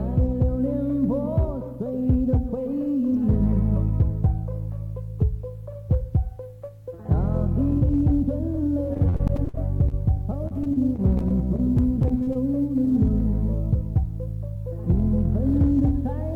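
From 8.93 to 9.94 s, repeated packet loss breaks up the sound. It suggests about ten separate dropouts. Each hole is covered by stretching the last sound forward, roughly a quarter of the stretch, with the longest gap near 56 ms. It turns choppy and robotic. The same fault returns from 10.48 to 12.37 s. That run points to around fourteen gaps, up to 39 ms. About 15% of the span is filled in, giving the same choppy stutter.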